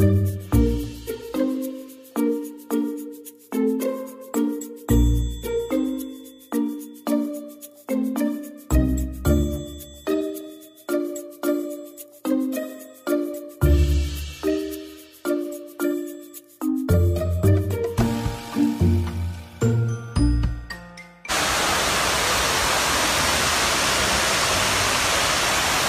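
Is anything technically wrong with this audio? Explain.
No, nothing technically wrong stood out on listening to this audio.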